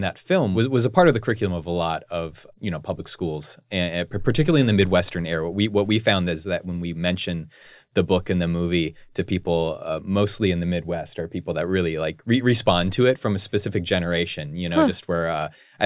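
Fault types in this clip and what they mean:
No technical faults can be heard anywhere in the audio. There is nothing here that needs a line of its own.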